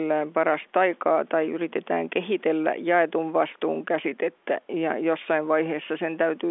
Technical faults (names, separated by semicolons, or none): none